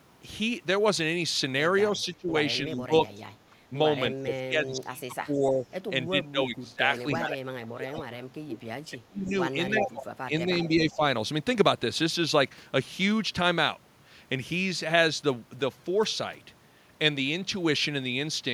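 The speech dips and breaks up from 1.94 to 2.31 s, 2.65 to 3.73 s, 4.23 to 9.32 s and 9.71 to 11.01 s, falling by up to about 25 dB (about 10 dB in the second stretch). This is speech suppressed in double talk, likely caused by an echo canceller that could not tell the talker from loudspeaker echo while both sides spoke. Inside that long stretch, at 7.86 to 8.03 s and 9.25 to 9.32 s, a faint delayed copy of the voice slips through about 358 ms late, roughly 15 to 20 dB under the speech. This is echo leak, likely caused by the far end's canceller letting residual loudspeaker pickup return.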